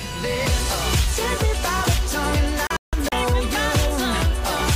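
Between 2.67 s and 3.12 s there is a digital broadcast dropout. The receiver stopped getting clean frames and muted until valid ones returned, so about 224 ms of audio is missing, spread as several short holes across that stretch rather than one gap. The longest hole is 160 ms. Each cut drops to silence through a very fast 3 ms fade, which sounds like abrupt chopping. The material in the gaps is simply lost.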